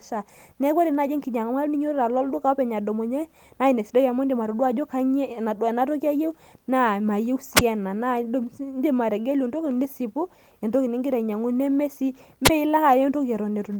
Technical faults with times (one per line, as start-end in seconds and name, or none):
7.55-7.61 wireless microphone squelch dropout
12.44-12.50 wireless microphone squelch dropout